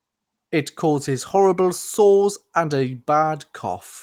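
Speech clip carried over Opus voice compression at 24 kbps in fullband hybrid mode, leaving only light coding damage and no faults to report.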